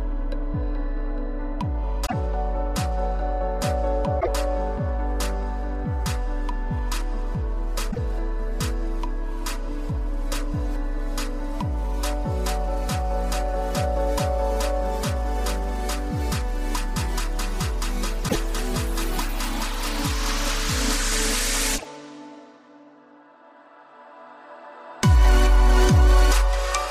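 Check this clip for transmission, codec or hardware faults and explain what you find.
There is one fault, a broken MP3 bit reservoir, heard five times: 2.05–2.13, 4.19–4.28, 7.90–7.99, 18.27–18.36 and 21.77–21.86 s. Missing frames likely left following frames reading borrowed data from the wrong place. Each time, the sound skips forward and garbles for about 80 ms, roughly three 26.1 ms frames.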